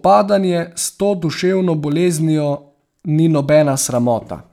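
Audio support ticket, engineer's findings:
Repeated buffer at 1.92 s in speech: brief click as a 2.9 ms block plays twice with hard joins, fitting a 128-sample buffer. Playback device starved, a few milliseconds of audio lost.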